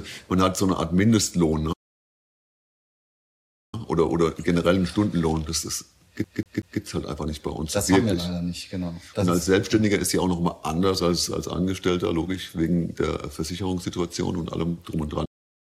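At 1.72 s the sound cuts out and stays silent for 2.0 s, resuming at 3.74 s: a playback stall, likely the player running short of data or its thread being blocked. The waveform shows a flat line, and the spectrogram a blank vertical band. At 6.24 s a CD stuck on one turn repeats a 188 ms slice three times, with a brief mute at each jump, until 6.81 s. This produces a rapid, even stutter, visible as identical repeating blocks in both views. From 15.25 s to the end, another playback stall silences the output, again likely from starved or blocked playback, and it appears as a flat trace.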